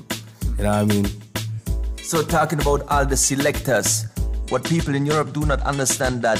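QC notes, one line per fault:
4.48–6.39 s, Bluetooth SBC bit pool drop: treble dulls and gritty noise rises until the end, fitting a bit pool cut from 28 to 12 at roughly 96 kbps. Starved upper sub-bands vanish and coarse quantisation adds grain. The spectrogram shows the top band abruptly emptied, with speckled noise below.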